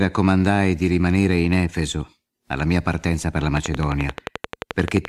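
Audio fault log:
3.57–5.06 s, train of clicks: straight after "mia partenza per la", a regular ticking starts and runs to the end, about 11.5 clicks per second, some twenty in all. Each click has much the same sharp shape and peaks about 15 dB above the speech, so the ticking sits on top of the speech rather than under it. The even spacing points to a repeating external pulse, likely interference from nearby equipment or a faulty connection or power supply.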